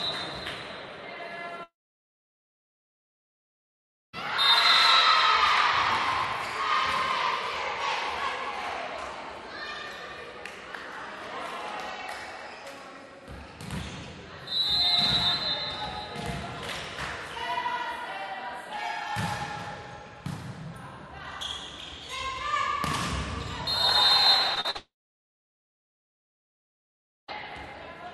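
A recording of everyday sounds, carried over a call link whose Opus coding stops the top end at around 12 kHz. Two long network dropouts break it up. At 1.63 s the sound is carried on as a brief fading buzz or hiss, then about 2.4 s of near-silence follows. It returns at 4.15 s with that stretch gone. The same happens from 24.77 s to 27.3 s. The likely cause is that no packets arrived for about 2.5 s each time. Just before the second gap come three short concealed packet losses, at 24.55 s, 24.60 s and 24.70 s. They lose 20, 40 and 40 ms. The receiver patched each hole by extending the preceding sound and blending back in. Each one is heard as a quick smear or wobble.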